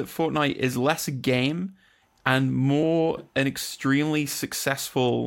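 At 2.82 s the speech jumps ahead where one compressed frame, about 30 ms of audio, was skipped by the decoder or lost from the file. The overlapping neighbours leave a short smeared blip, not a click. A spectrogram shows a slight vertical discontinuity with formants shifting abruptly.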